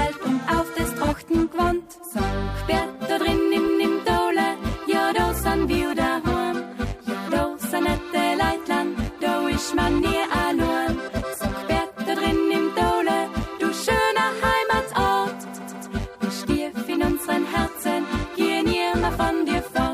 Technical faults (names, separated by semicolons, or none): repeated frames